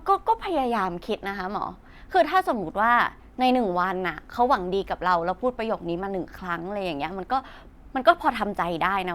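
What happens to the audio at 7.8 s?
Nothing goes wrong at 7.8 s: the speech plays through that moment intact, with no dropout, click, distortion or other fault.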